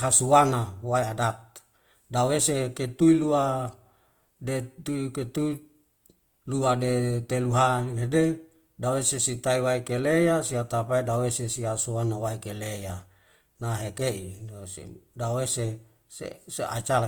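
Throughout the speech, a plainly audible roughness suggests Opus compression, likely in its CELT music mode at a low rate around 24 kbps. Starved bands are filled with noise, so the sound turns grainy rather than swirly as with MP3, and the full bandwidth stays up to 20.1 kHz.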